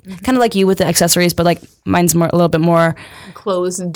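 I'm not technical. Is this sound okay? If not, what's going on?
No. Hard clipping runs through the whole clip: the speech was too loud for the recording to hold, so its loudest peaks get sliced flat, adding a brief crackly roughness.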